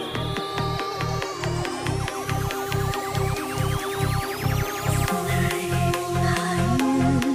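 From 3.72 to 5.39 s there are CD scratch ticks: eight short, evenly spaced clicks, about four a second, the longest lasting only a few milliseconds. A blemish on the disc corrupts more data on each revolution than error correction can recover, so the player patches or silences those samples. On a spectrogram each tick is a thin vertical broadband line at regular intervals; the waveform shows matching tiny spikes or flattened notches.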